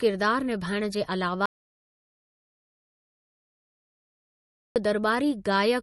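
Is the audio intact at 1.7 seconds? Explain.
No. An audio dropout to silence runs from 1.46 s to 4.76 s, right after "निभाइणु जे", so 1.7 s falls inside it. The sound stops mid-flow and the gap is silent, with no room tone. That points to the input being lost while recording carried on writing silence, likely from a disconnected device, a failed link or a stray mute. About 3.3 s of speech is gone and cannot be recovered.

MP3 compression also affects the speech around the gap. It likely comes from a low-bitrate encode, with the damage fitting something near 40 kbps. Short of bits, the encoder removed everything above 11.6 kHz and let weak frequency lines drop in and out between frames. The result is plainly audible: a dull, watery, swirling quality, chirpy s sounds and smeared attacks on the speech either side of the silence.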